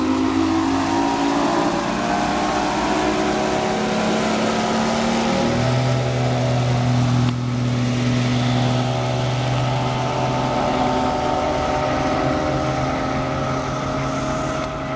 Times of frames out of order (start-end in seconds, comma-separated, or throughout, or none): none